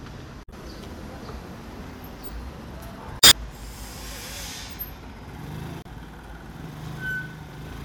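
At 0.43 to 0.53 s, 3.18 to 3.33 s and 5.82 to 5.87 s, damaged data in the compressed stream produces brief glitches. Corrupted frames are misread by the decoder, which loses sync and must find the next valid frame header before the audio resumes.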